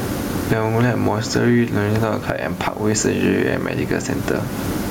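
From start to finish, low bit depth with dither leaves a steady, even hiss roughly 25 dB below the speech, without distortion. That noise level fits an 8-bit signal dithered before rounding. Gain pumping also runs throughout: the gain swings by around 15 dB, squashing levels, likely from excessive input gain pulled back by a fast limiter.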